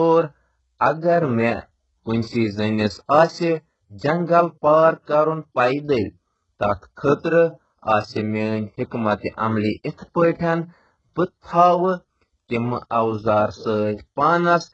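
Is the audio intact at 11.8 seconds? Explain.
No. At 11.8 seconds, as throughout the clip, the speech has been squeezed through what is likely HE-AAC compression at a very low rate, which fits a bitrate around 8 kbps. The codec keeps only the lower spectrum and fakes the treble by copying lower bands upward under a coarse envelope, with nothing at all above 7.9 kHz. The copied harmonics don't align with the real ones, so s sounds come out gritty, metallic and lispy.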